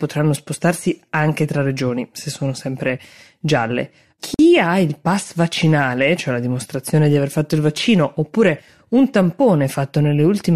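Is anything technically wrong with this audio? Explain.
Yes. Between "se sono sempre gialle" and "ha il pass vaccinale", from 4.34 to 4.39 s, a gap at a join of encoded pieces opens a 47 ms gap. Separately encoded pieces kept their encoder start delay and final-frame padding. Unlike a dropout, nothing is lost: the speech resumes exactly where it stopped, with smeared edges.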